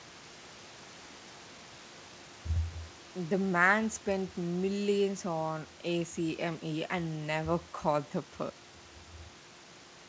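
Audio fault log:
No faults heard anywhere in this speech recording.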